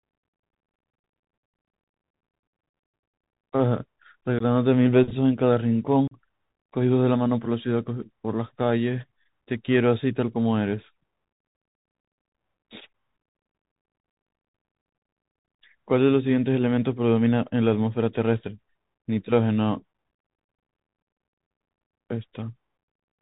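Speech carried over a Bluetooth CVSD headset codec throughout: nothing above 4 kHz, a granular hiss, and scratchy s sounds, which fits a 64 kbps CVSD link rather than ordinary low-pass filtering. Unconcealed Bluetooth headset packet loss leaves abrupt holes at 4.39–4.43 s (15 ms lost, a couple of packets) and 6.08–6.14 s (37.5 ms, a handful). Unlike smoothed dropouts, nothing is filled in, and the speech returns briefly quieter.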